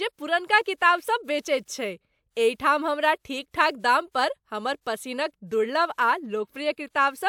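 No technical faults are audible.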